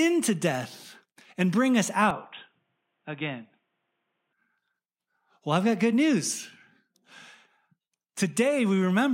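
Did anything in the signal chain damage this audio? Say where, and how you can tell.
Yes. Right after "death and bring us", at 2.11 s, the speech turns dull and boxy, loses everything above 3.8 kHz, drops about 5 dB in level and picks up faint new background noise, then clears at 4.33 s without a gap. This is likely the input switched to a poorer device at the driver stage.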